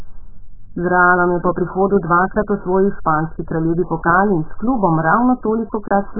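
Throughout the speech, the sound is dull and smeared, with a warbling, fizzy texture on sustained sounds and sibilants, likely from heavy AAC compression at a very low bitrate. Nothing remains above 1.7 kHz, so a spectrogram shows a hard ceiling there.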